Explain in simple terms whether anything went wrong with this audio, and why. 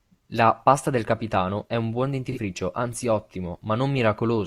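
Around 2.32 to 2.39 s there is a brief AAC frame loss with concealment. A chunk of the compressed audio, roughly 43 ms long and consistent with a single lost frame, never reached the decoder. Instead of leaving a gap, the decoder patched the hole by reusing the sound from just before it with its fine detail scrambled. The result is a short smeared or noisy blip in the speech rather than a clean dropout.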